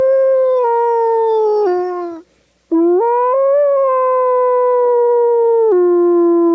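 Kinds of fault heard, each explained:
Gain pumping: The gain ducks by about 5 dB under loud sounds throughout. Likely cause: a fast limiter on excessive gain.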